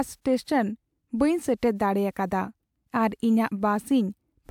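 No technical faults are audible.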